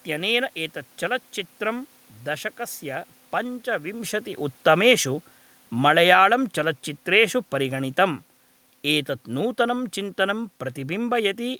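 At 5.72 s the automatic gain falling kicks in, pulling the level down about 6 dB through 6.29 s, so the speech and room noise sink together. Then from 6.2 to 6.58 s the automatic gain rising brings the level up by about 3 dB, and everything, background included, swells partly back.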